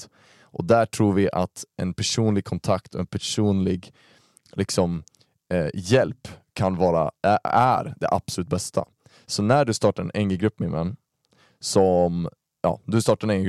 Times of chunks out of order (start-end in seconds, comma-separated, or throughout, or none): 7.48-7.50